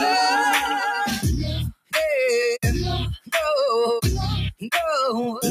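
From start to end, a noise suppressor built for speech is applied to the sounds. It treats steady tones and decays as noise, so the level swings by around 5 dB. Unlike compressor pumping, this follows how sustained a sound is, not how loud.

The sound is cut by the noise suppressor at 1.73 to 1.95 s, dropping by about 20 dB, and again at 3.17 to 3.33 s, by about 18 dB. These are deep sags rather than true silences as in a dropout, and held or fading material sinks while sharp onsets still get through.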